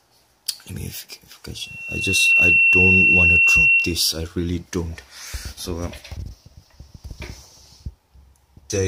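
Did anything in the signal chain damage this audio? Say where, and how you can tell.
Yes. Loudspeaker feedback squeal damages the audio at the acoustic stage, where the microphone hears its own loudspeaker. From 1.57 s to 4.06 s a single steady tone at 2.7 kHz appears, swells over roughly 0.7 of a second, and sits around ten decibels above the rest of the sound until it stops. At that frequency the mic-to-speaker loop had gain above one, so the tone kept regenerating until it stopped.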